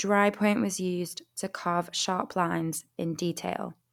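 No technical faults can be heard anywhere in this speech recording; the signal stays continuous and steady throughout.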